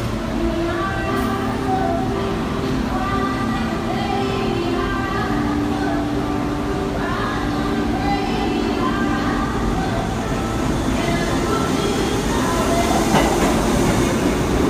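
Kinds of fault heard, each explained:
No kinds of fault are heard in this clip.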